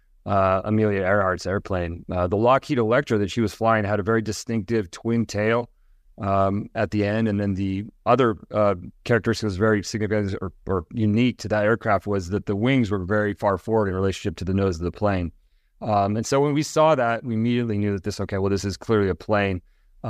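A recording of speech, with no technical faults to report. Nothing in it calls for a time, a cause or a fix.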